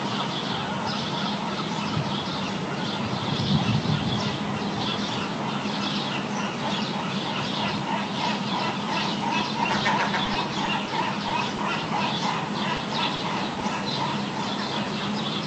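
A recording of everyday sounds that's come through an Opus call path, where the top end stops at around 8 kHz, and it has two kinds of trouble. First, repeated stalls (stutter) between 10.25 and 10.88 s. The jitter buffer kept running dry, four times in that stretch, and each time the receiver stretched the last bit of sound to cover the wait. That adds about 70 ms of filler in total, roughly a tenth of the span, with no gap longer than about 20 ms. Nothing actually goes missing, but that passage drags and judders. Then there's short concealed packet loss at 11.28, 11.56, 12.76, 13.16 and 13.54 s. Each time about 20 ms of audio never arrived, and the decoder papered over the hole by continuing the preceding sound before blending back in. You hear each one as a quick smear or wobble.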